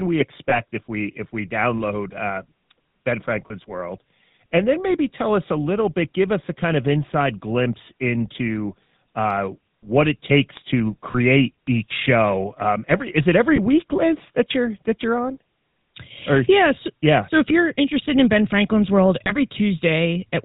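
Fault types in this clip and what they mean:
GSM full-rate codec: the whole speech clip runs through the old 13 kbps GSM coder, which rebuilds the voice from a vocal-tract model fed with sparse pulses and drops everything above 4 kHz. Here that gives a plainly audible buzzy, gravelly roughness throughout.
Lost GSM frames: when a frame goes missing, the decoder replays the last good frame's settings, so you hear a brief rough, metallic ring. There are five single-frame gaps of about 20 ms, at 0.5 s just before "if we if we", then 3.48, 11.12, 13.56 and 19.24 s.
Bit error spike: a single flipped bit makes a couple of samples jump by a power of two and snap straight back, heard as one sharp broadband tick that has nothing to do with the speech. It happens twice, at 10.57 s right after "into uh what it" and at 11.67 s just before "each show".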